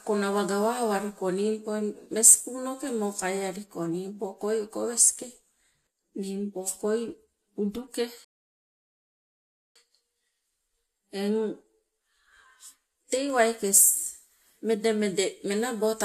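At 8.25 s the speech halts in a rebuffering stall. The player has run out of downloaded audio, so it goes silent until more data arrives. Playback resumes at 9.76 s exactly where it stopped. Nothing is skipped, but about 1.5 s is added.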